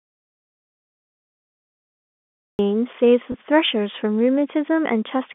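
The clip opens already in an audio dropout to silence, running until 2.59 s. That stretch is silent with no room tone at all, so the input was most likely lost for a while as the recorder kept writing blank samples, and the speech just snaps in.

Then at 3.32 to 3.34 s there's packet loss with pitch repetition. About 20 ms went missing, which fits a single lost packet, and the receiver patched it by repeating the last pitch period. You hear a tiny held, slightly buzzy blip over the narrow telephone-band speech.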